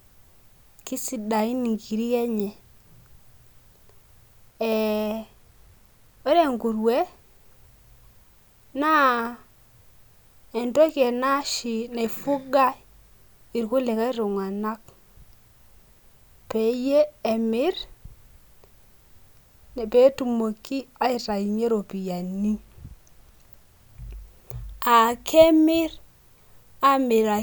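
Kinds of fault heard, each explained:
No technical faults are audible anywhere in this speech recording. There is nothing to list under any kind.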